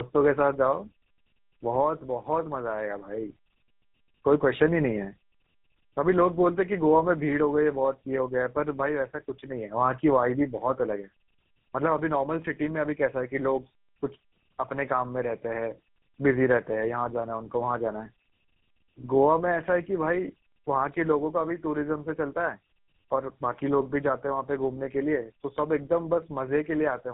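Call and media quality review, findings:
Tandem speech coding, whole clip. Speech rough, muffled and warbly. Nothing above 3.8 kHz. Points to two speech codecs in series, G.729A then GSM full rate, bridged by a G.711 leg. Each re-encodes the previous codec's damage, compounding it.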